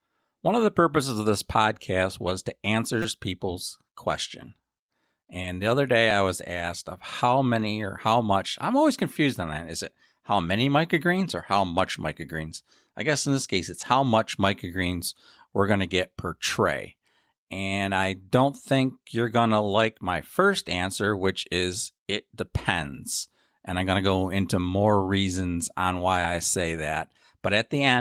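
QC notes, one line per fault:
2.21–2.23, 5.44–5.46, 7.60–7.66, 12.51–12.53 and 13.81–13.83 s: lost packet rebuilt from error correction. Each spot sounds briefly rough and grainy, with no gap in the speech. A 20 ms packet went missing each time (40 ms, two packets, at 7.60 s). The decoder played the lower-bitrate copy carried in the following packet, keeping the flow continuous but coarsening detail, and any top end missing from that copy is only estimated.
3.02–3.05 s, 6.11 s and 9.13–9.16 s: repeated buffer. These come across as a quick stutter or buzz at 3.02 and 9.13 s and a single click at 6.11 s. Fresh audio arrived late, so playback looped the last 5.8 ms block, which fits a 256-sample buffer at 44.1 kHz. It repeated four extra times at the longer two and once at 6.11 s. Each hard seam produces the click, and the rapid repeats fuse into a buzz.
5.42–5.46 s: short concealed packet loss. 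A brief smear or wobble is heard here, and a short consonant may drop out. The first 20 ms never arrived in time, so the receiver extended the preceding sound, carrying its pitch if voiced or filling with shaped noise if not, then blended into the following 20 ms, which was itself the error-correction rebuild listed above.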